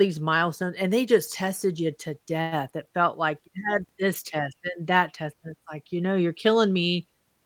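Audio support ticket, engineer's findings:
Call audio freeze at 2.41 to 2.54 s, right after "just tested you to": last sound held as a fading buzz for about 0.1 s, then speech resumes where it stopped, nothing dropped, just pushed later. Likely the jitter buffer ran dry while packets were held up in transit.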